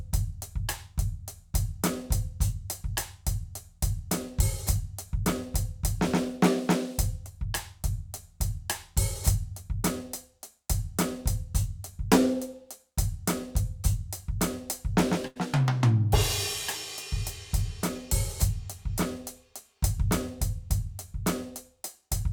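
A burst of packet loss interrupts this music at 15.27 s. Several consecutive packets never arrived in time, so the receiver concealed the gap by stretching out the last sound it had, about 80 ms of filler that sags in level as it goes, heard as a held, dimming smear. At 15.37 s the music picks up again further along, with roughly 80 ms of the original simply gone.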